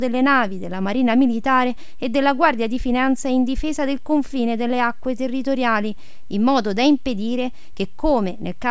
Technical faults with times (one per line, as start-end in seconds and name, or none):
none